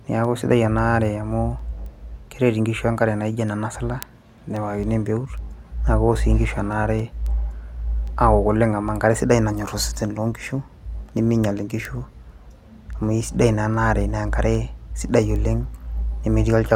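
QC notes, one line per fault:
0.25–16.71 s, word clock ticks: Around seventy ticks at a steady rate, roughly one every third of a second. The receiving device is not locked to the sender's clock and drifts about 100 ppm. Each slip drops or repeats one sample.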